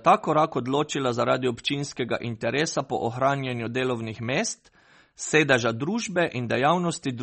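From start to finish the speech carries plainly audible MP3 compression damage, likely from an encoder starved of bits, which fits a rate near 32 kbps. Nothing remains above 8.4 kHz, so sibilants lose their edge, and weak spectral detail flickers in and out between frames, giving a watery, swirling texture with chirpy s sounds. A plain low-pass filter would dull the treble just as much but leave the remaining sound steady, without this warbling.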